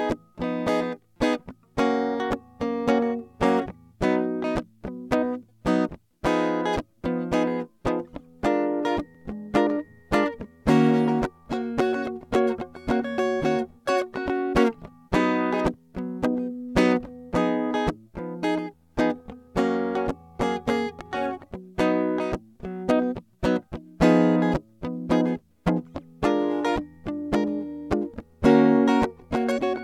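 Nothing in this music stands out as a technical fault, so there's no problem to point to.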